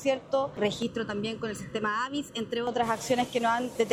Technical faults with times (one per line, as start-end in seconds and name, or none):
0.82-2.67 channel delay (comb filtering)